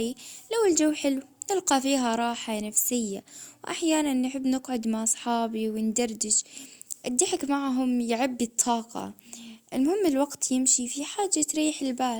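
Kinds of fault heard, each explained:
No kinds of fault are heard.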